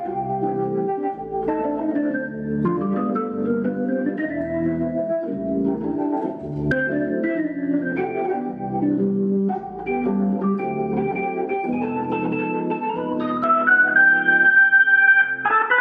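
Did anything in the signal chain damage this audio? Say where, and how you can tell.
Yes. At 13.44 s the sound abruptly turns dull and boxy and stays that way to the end at 15.80 s, with nothing above 3.8 kHz, a level shift of about 5 dB, and a new, faint noise floor roughly 55 dB down. There is no gap at the changeover. This is likely an input switched to a poorer device at the driver stage. A codec dropping bandwidth would narrow the band but keep the original level and background noise.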